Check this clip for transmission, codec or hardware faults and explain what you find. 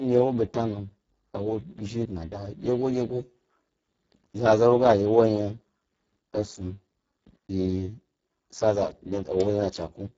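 One codec fault runs through the whole clip: Speex codec damage, and it is heavy. The speech sounds hoarse, noisy and partly robotic, which fits a bitrate near 6 kbps. So few bits leave the excitation crudely modelled. Nothing is present above 7.7 kHz.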